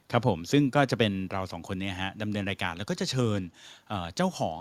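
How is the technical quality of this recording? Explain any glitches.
No technical glitches can be heard in this speech recording. Nothing in it needs a technical explanation.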